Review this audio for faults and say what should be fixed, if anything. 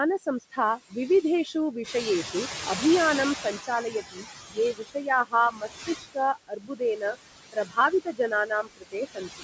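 The noise suppressor cuts steady background by about 17 dB frame by frame throughout, leaving noise-suppressor artifacts. The background sinks in the gaps and swells back under the speech.

Speech is cut by the noise suppressor where it mistakes parts of the speech for noise. Between 0.23 and 0.58 s, brief stretches drop by up to about 9 dB. From 3.44 to 7.17 s, roughly a second and a half in total drops by up to about 21 dB. From 7.52 s to the end, well under a second is affected, again by up to about 21 dB. Soft consonants and word endings sound swallowed or faint.

The noise suppressor is catching up from 1.83 to 4.34 s. The room noise jumps by about 10 dB around 2 s, and the suppressor's noise estimate takes 2.51 s to follow. The louder background comes through with little reduction at first, then sinks to about 17 dB down. The call's microphone processing leaves nothing above 8 kHz, which is expected.

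A gentler suppressor setting with better speech detection and a faster-adapting noise estimate would prevent these faults.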